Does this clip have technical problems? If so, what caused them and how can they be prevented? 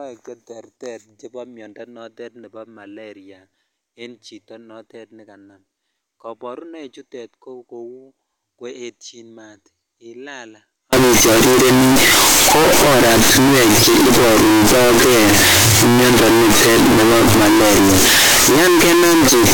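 Yes. From 10.93 s, right after "koetyin maat ilaal", to the end at 19.54 s, the speech turns very loud and harsh, with background noise as loud as the speech, though the pitch can still be followed. This is a float-read-as-integer fault, likely from 32-bit float samples being read as 32-bit integers, so each sample's sign and exponent bits set its value. The waveform becomes a nearly square block at an almost fixed, high level regardless of the original level, and the spectrogram fills with dense broadband energy that buries the quiet gaps. To prevent it, make sure the sample format declared in the file header or stream matches the format actually written.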